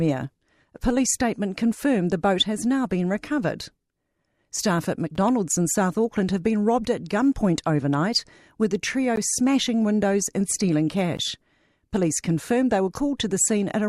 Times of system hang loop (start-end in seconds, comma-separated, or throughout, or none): none